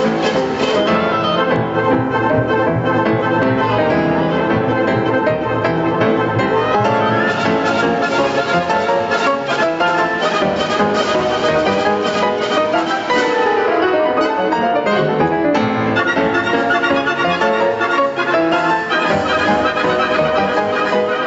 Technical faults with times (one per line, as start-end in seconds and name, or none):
0.00-21.27 gain pumping